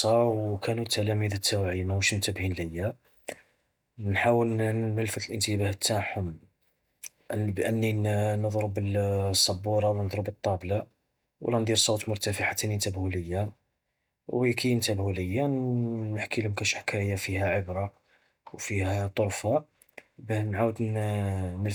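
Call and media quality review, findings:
Nothing stood out on listening to the speech recording, and no findings are raised.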